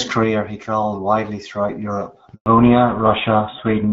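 At 2.34 s the sound cuts out almost instantly and stays silent for 120 ms, until 2.46 s, with nothing audible filling the hole. This is a handover gap: the call switched networks, and no speech frames arrived while the new link came up.

From 2.46 s to the end, everything above 4 kHz is gone, and the voice turns duller, boxier and rougher than the clear HD Voice sound before the gap. This is a fallback to narrowband, consistent with a switch to an older codec such as GSM full rate.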